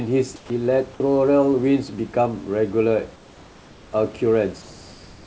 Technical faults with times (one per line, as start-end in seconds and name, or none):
0.36-0.50 comfort noise in place of the background
0.47-0.50 onset clipped by the voice detector
3.16-3.92 comfort noise in place of the background